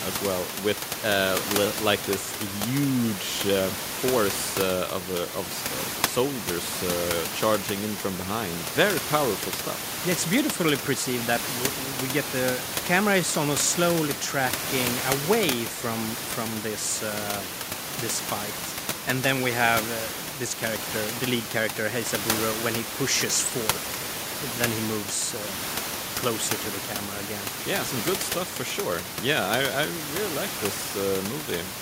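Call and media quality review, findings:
No system faults found in this speech clip; only the room's own background noise is present, about 9 dB below the speech, and that comes from the recording environment, not the system.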